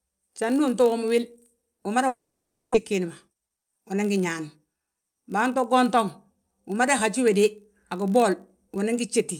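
From the first moment to the end, a filter restarted on every block puts a small transient at the start of each processing block. With nothing carried over between blocks, each one begins from silence, producing a steady 50 Hz buzz that rises and falls with the speech level. On a waveform this appears as evenly spaced spikes every 20 ms. A spectrogram shows faint vertical lines at that spacing, plus energy at 50 Hz and its harmonics.

Right after "wil umada", from 2.07 s to 2.76 s, the sound breaks up in a way that points to a long network dropout as the likely cause. The receiver stretches the last sound into a fading buzz. It then gives way to near silence, and the speech resumes with some of it missing. In the waveform the envelope decays into a flat stretch. The spectrogram shows smeared harmonics thinning to a blank gap before normal speech returns.

From 2.92 s to 5.02 s a jitter buffer speed-up follows. 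After the delay jumped by about a third of a second, the receiver catches up by cutting out many short pieces of a pitch period or so. The speech runs at about 112 % speed with unchanged pitch and sounds hurried. Syllables in the waveform sit closer together. On a spectrogram the harmonic spacing stays the same while the time patterns are compressed, sometimes with small seams at the cuts.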